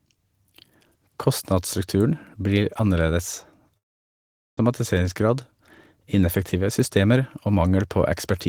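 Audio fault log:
3.77–4.59 s, long network dropout: the speech breaks off, a brief buzzy continuation of the last sound fades away, and nearly 0.8 s of near-silence follows before the speech resumes with that stretch gone. The likely cause is a run of packets that never arrived, with the receiver briefly extending the final sound before giving up. On a waveform this shows as a short decaying tail, then a flat gap. On a spectrogram it appears as a smeared fade into a blank band.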